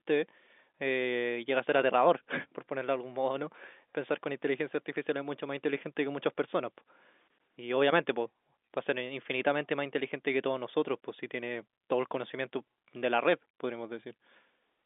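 The speech carries no technical faults, with the G.711 mu-law telephone coding at 64 kbps doing what it should: the sound sits in a line band of about 250 Hz to 3.6 kHz, nothing passes above 3.8 kHz, and the codec's own texture is at most faint.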